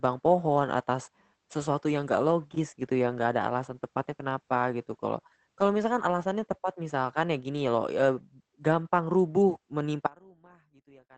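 At 3.05 to 3.15 s there is a lost packet rebuilt from error correction. The speech runs on without a break, but for that tenth of a second it turns rough and grainy, which fits three separate 20 ms packets being replaced by the lower-bitrate copies each following packet carried. Ordinary packet loss concealment would leave a smeared, buzzy repeat or a fade. Here the actual sound continues, just coarser, which is the mark of in-band recovery.

From 10.07 s to the end, the level drops by about 29 dB. What remains is a faint residue of the speech rather than silence. The likely cause is one channel inverted: with one stereo channel's polarity reversed, the material common to both cancels when they are summed to mono, and only their small difference survives. A true dropout or mute would leave nothing, whereas this leaves a ghostly remnant.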